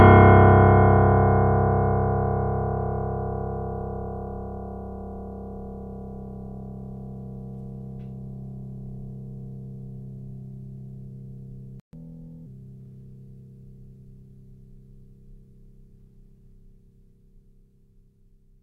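A music clip with two linked faults. At 11.80 s the music cuts to silence for about 133 ms, then resumes at 11.93 s. This playback stall is likely the player running out of buffered data or having its thread blocked. From 11.93 s to 12.46 s comes catch-up at higher speed. The player resamples its backlog at 1.25 times normal speed. Tempo and pitch both jump, the pitch by roughly four semitones. Both then snap back to normal once the lost time is recovered.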